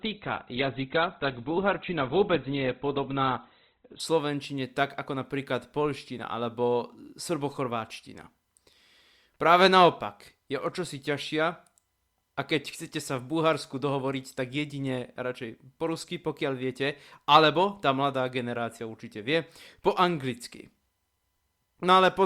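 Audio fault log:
0.0–4.0 s adaptive stream starting at a low bitrate: speech is artefact-heavy, fitting an Opus start near 12 kbit/s; spectrogram blank above 4.5 kHz, then full treble appears abruptly, gapless, at 4.0 s.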